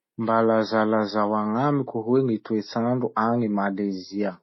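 It's a speech clip with transcoding between lossy codecs running the whole way through: nothing above about 5.8 kHz, and two layers of smeary artefacts stacked together, likely a low-rate MP3 around 24 kbit/s re-encoded to HE-AAC around 40 kbit/s, keeping the first codec's damage.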